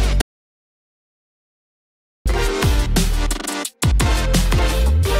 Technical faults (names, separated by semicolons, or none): audio dropout to silence